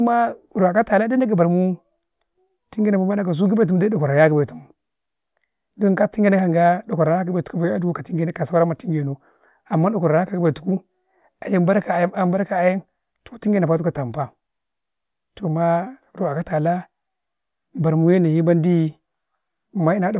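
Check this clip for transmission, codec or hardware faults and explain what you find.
Nothing in this speech recording points to a transmission, codec or hardware problem.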